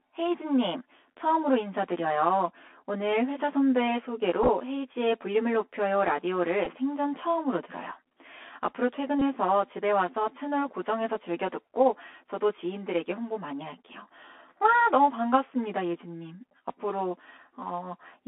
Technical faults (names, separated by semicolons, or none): channel delay (comb filtering); Bluetooth CVSD headset codec; Bluetooth headset packet repeated